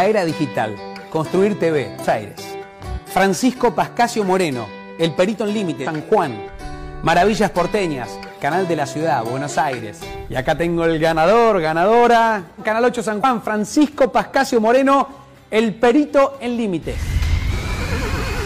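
Four short faults break through the sound, at 2.00 to 2.06 s, 5.81 to 5.87 s, 13.19 to 13.24 s and 17.47 to 17.52 s, each lasting about 50 to 60 ms. These are damaged data in a compressed stream: corrupted bytes make the decoder misread those frames, lose sync and hunt for the next valid frame header.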